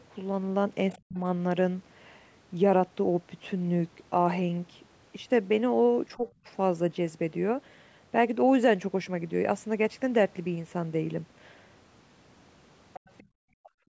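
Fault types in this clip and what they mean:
Other side's voice leaking through: A faint second voice appears at 0.93 to 0.99 s and again from 12.93 to 13.23 s. It sits about 20 to 25 dB under the main speech. This is likely loudspeaker echo that the echo canceller failed to remove from the microphone.
Speech suppressed in double talk: The main speech dips sharply at 1.04 to 1.19 s and at 13.6 to 13.87 s, falling around 40 dB. A milder dip of around 10 dB comes at 6.16 to 6.28 s. Likely the canceller turned everything down while both sides talked.
Background gated by the echo canceller: Right after the leaked voice ends, the room sound drops by about 23 dB from 13.23 to 13.32 s. It returns within about 100 ms. The canceller clamped the microphone while the loudspeaker played, then released it.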